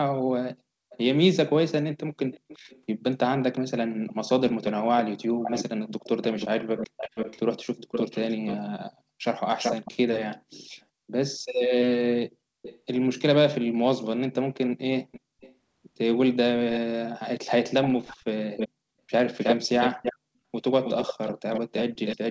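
A delayed copy of the speech trails the original from 0.9 to 0.97 s, 2.32 to 8.57 s, 9.57 to 10.85 s, 12.62 to 12.8 s, 15.12 to 15.55 s, 16.73 to 16.79 s, and from 17.83 s to the end. It lags by 317 to 472 ms. It sits roughly 5 to 25 dB below the speech in the other stretches but is about as loud as the speech itself between 9.57 and 10.85 s. This is echo leak, likely a far-end loudspeaker whose echo canceller let its microphone pickup return down the call.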